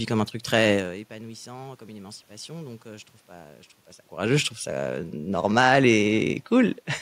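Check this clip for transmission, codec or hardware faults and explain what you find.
Nothing here points to a transmission, codec or hardware problem; what you hear is ordinary room noise in the background and the level of the speech shifting as the talker moves relative to the microphone around half a second in and again near four seconds.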